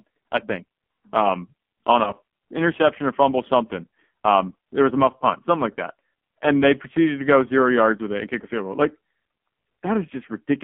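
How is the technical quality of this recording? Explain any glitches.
Pretty rough, honestly. It's narrowband phone-call audio with heavy codec damage throughout, plus one short dropout early on.

The whole clip runs through an AMR narrowband mobile codec. The band sits at roughly 200 Hz to 3.4 kHz, so the top end is gone and the low end is thin. The speech comes out buzzy and synthetic, because the codec rebuilds the voice from a vocal-tract model fed by a handful of pulses. The heaviness of the damage fits a low mode around 5.9 kbps.

From about 2.04 to 2.15 s, between "I think um on" and "interception or fumble something", there are lost AMR speech frames. It sounds like a single frame failed. The decoder filled the gap by repeating the last good pitch and vocal-tract settings at lower gain. You hear a quick dip or warble, then the speech picks back up weak or rough for a moment.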